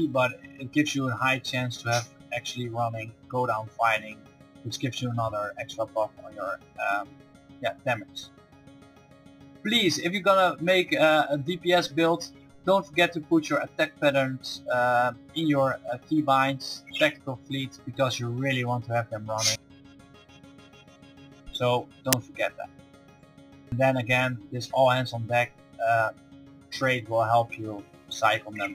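At 22.13 s a sudden, loud crack lasts only about 5.8 ms. This is an uninitialised buffer: a block was sent to playback before any audio was written into it, so leftover memory contents came out as samples, which fits a 256-sample buffer.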